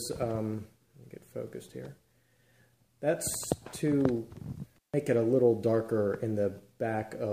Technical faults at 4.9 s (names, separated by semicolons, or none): intermittent contact